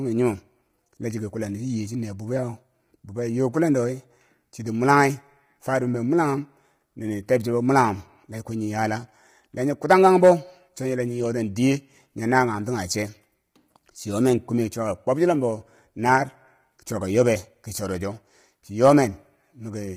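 Low-delay AAC compression runs through the whole speech clip, and the heavy damage likely comes from AAC-ELD, the codec used for video calls. At this low bitrate it cannot spend enough bits on the spectrum, so noise fills the gaps between the pitch harmonics and the voice turns rough and grainy. The top band sounds dulled and synthetic. The amount of damage fits a low bitrate of around 24 kbps.

Hard clipping first appears from 9.91 to 10.31 s, right after "nyi yala la nyi". Here the signal overshoots the stage's limit by about 4 dB, and the peaks are sliced flat. Those squared-off tops create harmonics high above the voice's own range, and they are heard as crackle on the peaks. A second, shorter burst follows from 18.85 to 18.92 s, overdriven by about 3 dB, and gives a brief crackle on that peak.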